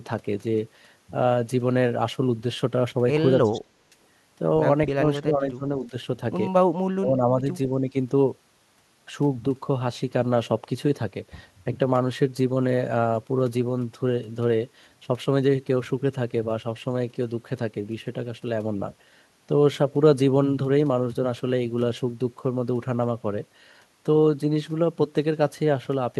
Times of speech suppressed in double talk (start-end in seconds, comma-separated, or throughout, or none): 3.42-3.92, 4.94-5.93, 6.89-7.44, 7.81-7.94